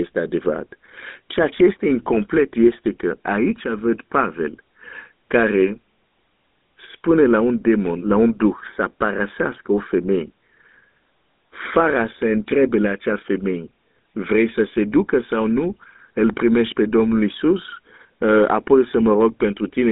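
Speech carrying GSM full-rate codec damage throughout: a buzzy, gravelly roughness, with the band squeezed to 200 Hz to 3.7 kHz and nothing above 3.8 kHz. Plain telephone band-limiting would sound narrow but clean; this pulse-driven grit fits a 13 kbps coder.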